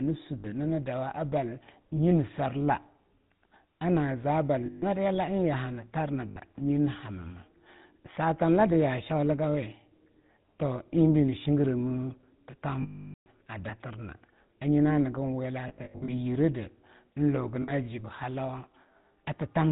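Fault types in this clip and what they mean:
GSM full-rate codec: The whole speech clip sits behind the old 13 kbps GSM full-rate codec. It models the vocal tract and excites it with a sparse, regularly spaced pulse train, so the voice takes on a buzzy, gravelly grain, and nothing above 4 kHz survives. The damage is plainly audible. Plain band-limiting would only dull the sound. What marks this codec is the rasp carried inside the voice itself.
Lost GSM frames: At 0.38, 4.66, 6.28, 12.82, 15.68 and 17.62 s the decoder lost frames and kept repeating the last good one at falling level. Short gaps of 60 to 80 ms come out as a brief metallic ring. The 440 ms loss at 12.82 s rings and then is cut to silence. Around 15.68 to 16.11 s the losses are scattered, which makes a stuttering ring. A dropout would go silent at once, but here the sound hangs on before it fades.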